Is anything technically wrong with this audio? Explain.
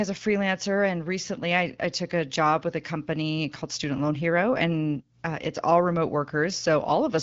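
No, nothing technically wrong.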